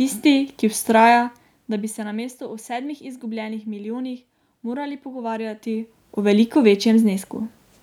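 A speech clip with zipper noise from 0.88 s to 2.23 s, while the level drops by roughly 15 dB. The gain moves in coarse, unsmoothed steps at roughly twenty per second, and each jump puts a small click into the signal, so a fast ticking rides on the speech as it fades. On a waveform the envelope falls as a staircase; a spectrogram shows faint, evenly spaced vertical broadband lines across that span.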